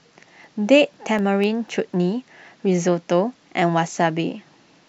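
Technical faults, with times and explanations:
0.19 to 1.94 s, periodic USB or driver dropouts: ticks every 0.25 s, where the driver stalls and a sub-millisecond sliver of speech drops to silence.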